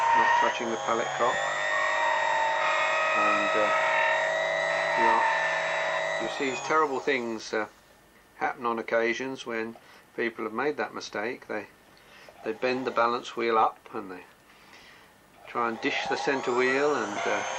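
No audible faults anywhere in the recording.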